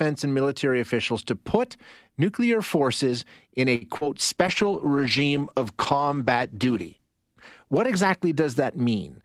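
Right after "nuclear forces in a", at 3.75 to 3.84 s, there's a short stall from a late packet. The jitter buffer ran dry, so the receiver held the last sound for about 59 ms until the packet showed up. Nothing's lost, but the sound drags briefly and everything after sits 59 ms later.

Just after that, at 3.97 to 4.04 s, comes a short concealed packet loss. About 40 ms of audio never arrived in time, and the decoder papered over it with roughly 35 ms of extrapolated sound before blending back in. It comes across as a quick smear or wobble.

From 4.23 s to 9.10 s there's a call bitrate drop, from 64 down to 14 kbps. The bandwidth estimate fell, so the Opus encoder coded much more coarsely and trimmed the top end. For the worst stretch, about 2.8 s, the speech sounds rough, watery or muffled.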